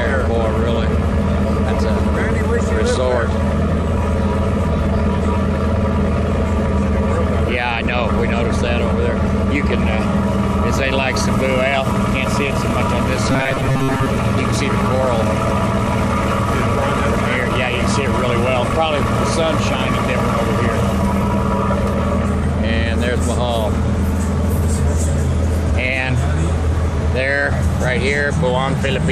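From 13.32 to 14.07 s the sound turns into a rigid metallic buzz at 134 Hz: robotic sound from repeated short buffers, likely from audio arriving too slowly and a roughly 7.5 ms chunk being looped through most of that stretch. A spectrogram shows evenly spaced horizontal harmonics at multiples of 134 Hz; the waveform shows identical repeating cycles.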